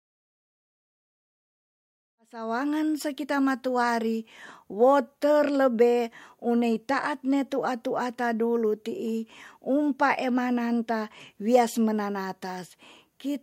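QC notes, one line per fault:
No faults found; the fade-in from about 2 s to 2.87 s rises smoothly, with no click or hard edge.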